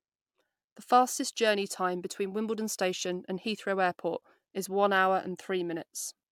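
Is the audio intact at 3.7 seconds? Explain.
Yes, at 3.7 seconds the speech plays through intact, with no dropout, click, distortion or other fault at that moment.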